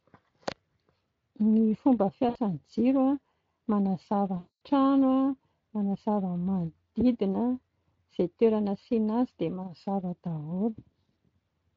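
VoIP packet loss concealed by the speech codec at 2.29–2.38 s and again at 4.37–4.56 s, just after "a manazava": the Speex decoder bridges each gap by extrapolating the last pitch and filter. The short gap becomes a brief buzzy tone or coloured noise. The longer one, about 240 ms, stretches into a fading buzzy tone or coloured noise before the speech returns weak or distorted.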